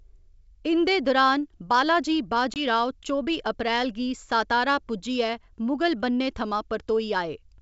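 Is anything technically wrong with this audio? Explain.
Yes. At 2.54 to 2.61 s there is packet loss on an ADPCM call, here on a G.722 wideband link. About 20 ms of speech, roughly one packet, drops out as a hard-edged silent gap. The decoder's adaptive predictor and step size lose step with the sender's. The speech returns slightly distorted before it settles.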